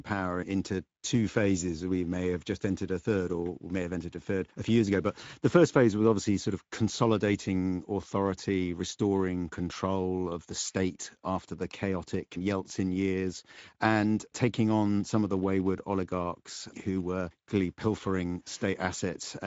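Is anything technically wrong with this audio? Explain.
Yes, the whole clip has gone through the Speex codec, and the damage is plainly audible from start to finish. Speex is a CELP speech codec, the kind older VoIP and game chat used. It models the voice with a filter and spends its limited bits on the excitation signal driving that filter. The artefacts suggest a rate of roughly 17 kbps. There's also nothing above about 7.7 kHz, which fits Speex's wideband mode cutting off the top end.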